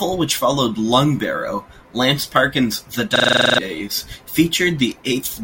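From 3.16 to 3.58 s the speech locks into a system hang loop: the machine or its driver stalled while the playback hardware kept replaying one ring buffer. A single 42.67 ms fragment, which fits a 2048-sample buffer, repeats exactly ten times at 23.4 Hz. It sounds like a rapid machine-gun stutter, and nearly half a second of speech is lost. Unlike codec concealment, the repeats are identical and never fade, and the sound cuts back abruptly.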